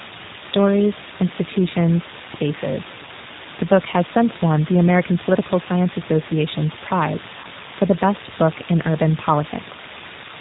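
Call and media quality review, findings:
Low bit depth with dither, full length. Constant, even hiss with no distortion, only around 10 dB below the speech. The level fits a 4-bit signal. Dither before rounding turns the quantisation error into steady white noise instead of grainy distortion.

G.729 codec, full length. Speech is band-limited below 4 kHz, sounding muffled, rough and plainly synthetic. This fits G.729A at 8 kbit/s. The decoder rebuilds each 10 ms frame from a vocal-tract filter, a pitch predictor and a few pulses.

VoIP packet loss concealed by the speech codec, 3.05 to 3.09 s. About 20 ms of signal is replaced by a fading extension of the preceding sound, which fits a single lost packet. The G.729 decoder repeats its last pitch and filter at falling gain. The speech stays weak briefly afterwards.

VoIP packet loss concealed by the speech codec, 7.40 to 7.46 s. About 40 ms of signal is concealed, consistent with two consecutive lost packets. 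The fade is longer than at 3.05 s. Because each frame builds on the last, the speech is distorted for a short while after packets resume.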